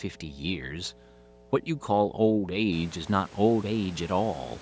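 Mains hum runs under the speech from start to finish. A ground loop or nearby transformer leaks the 60 Hz power line in, giving a steady low drone roughly 25 dB below the speech.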